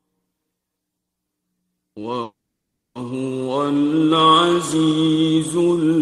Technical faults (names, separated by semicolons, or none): call audio freeze